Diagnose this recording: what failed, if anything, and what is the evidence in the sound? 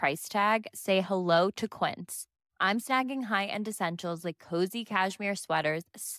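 Nothing seems to have failed anywhere along the chain, as far as I can hear; the speech arrives intact, with no audible trouble at any stage.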